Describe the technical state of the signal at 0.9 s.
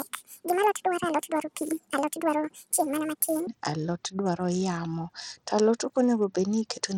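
At 0.9 s the speech sits inside a section at the wrong speed, running from 0.00 to 3.47 s. It plays 1.76 times too fast, most likely from being fitted to the wrong clock, so pitch and tempo rise together by roughly ten semitones, giving hurried, high-pitched delivery.

Across the whole clip, including this moment, there is Bluetooth SBC compression, with plainly audible damage consistent with a low-rate stream near 80 kbps. Coarse sub-band quantisation starves the upper bands, so treble flickers or drops out while gritty noise and aliasing sit on the sound.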